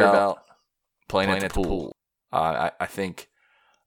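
From the very start until 1.92 s, the speech is heard twice: a second, full-band copy trails the original by roughly 150 ms, a few decibels quieter, with no room decay, and it drops away abruptly. This doubled audio track likely comes from the same signal being captured again by a slower path.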